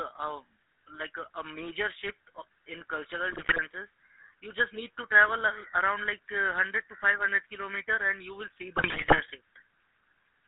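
GSM full-rate codec damage runs through the whole of this speech clip, plainly audible as a buzzy, gravelly roughness on the voice. The codec rebuilds the voice from a vocal-tract model driven by sparse, evenly spaced excitation pulses, so fine detail between those pulses is lost. The sound fits a 13 kbps full-rate stream, and the line band is squeezed to roughly 250 Hz to 3.7 kHz, thinning the low end and cutting the top. GSM bit errors then break the voice twice, from 3.30 to 3.59 s and again from 8.76 to 9.20 s, the second burst longer and harsher. Corrupted bits reaching the decoder scramble the filter, pitch and gain values frame by frame, so the spectrum lurches and the level jumps, turning the voice into squawks, pops and gargling. The damage points to a weak radio link dropping errors into over a dozen frames each time.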